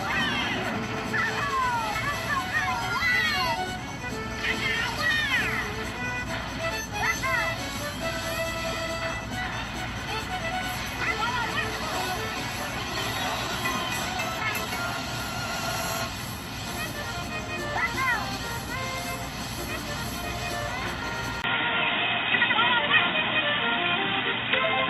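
At 21.42 s the sound abruptly turns dull and boxy through to the end, likely an input switched to a poorer device. A 20 ms silence marks the switch, the level shifts by a few decibels, and a new, faint noise floor appears. On a spectrogram, everything above 3.8 kHz vanishes at once.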